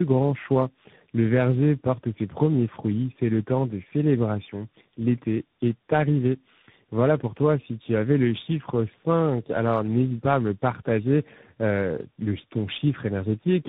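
Throughout the speech there is tandem speech coding: the sound has passed through several speech coders in sequence, which fits a chain of three such codecs ending in a CVSD stage. Each coder re-encodes the previous one's errors, so the result is rough, muffled and warbly. On a spectrogram nothing appears above 3.8 kHz, and harmonics look smeared and blotchy. The waveform carries granular noise riding on the speech.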